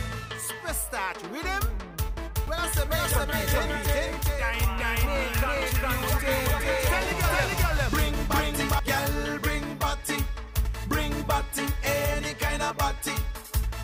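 From 2.47 to 8.79 s a doubled audio track appears: a full-band copy about equally loud trails roughly 400 ms behind, likely from a second capture path, starting and stopping abruptly.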